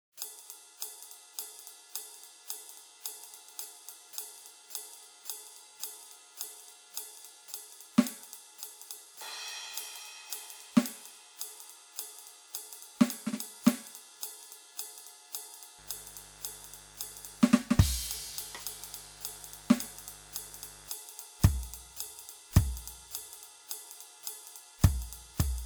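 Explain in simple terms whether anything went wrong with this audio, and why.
A mains buzz sits under the music from 15.8 to 20.9 s. Electrical switching spikes from a 50 Hz power supply leaked in, adding a steady, raspy hum.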